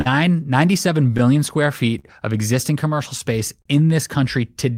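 Clock drift between sender and receiver runs through this speech recording: the sender's clock is about 4% slow, so the receiver's jitter buffer keeps draining and the timing hiccups recur. Short stalls from late packets occur at 0.01–0.07 s, 1.17–1.21 s, 1.99–2.06 s and 3.62–3.67 s, where the buffer ran empty and the last sound was held for 41, 17, 43 and 35 ms before playback resumed with nothing lost. Repeated timing corrections from 1.40 to 4.55 s repeat small pieces to slow playback to 99%, adding roughly 40 ms in all.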